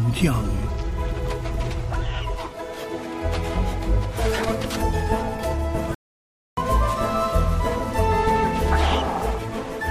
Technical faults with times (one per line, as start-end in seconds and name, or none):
5.94-6.57 playback stall